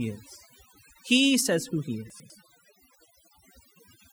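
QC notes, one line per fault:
Throughout, overdone noise removal: bands near the noise estimate are cut hard, taking quiet speech with them. This leaves near-silent gaps with twinkling specks, unlike steady codec smearing.
2.1–2.3 s, chunks out of order: one 100 ms chunk plays a chunk late, so sound is swapped rather than lost. This gives a jumbled moment with three hard joins, unlike a dropout's silence.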